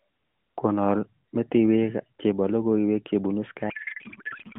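Up to 3.70 s the speech has the narrow, band-limited sound of AMR narrowband mobile coding, with only light codec damage. At 3.70 s a codec payload misread begins and runs to the end of the clip. The speech turns into garbled noise and warble that barely tracks it. The decoder is reading the bits of each frame from the wrong positions. This points to octet-aligned AMR frames being unpacked as bandwidth-efficient ones.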